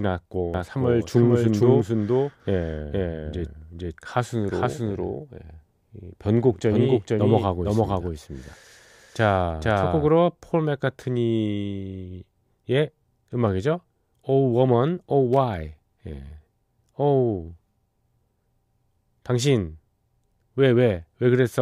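From 0.54 s to 10.08 s, the speech has a doubled audio track. A second full-band copy trails about half a second behind, at roughly equal loudness. It has no decay or room colour. It starts and stops abruptly, likely from a second, slower capture path.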